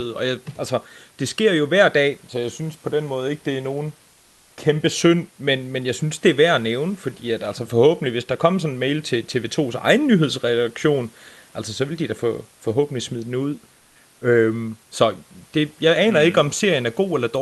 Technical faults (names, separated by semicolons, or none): comfort noise in place of the background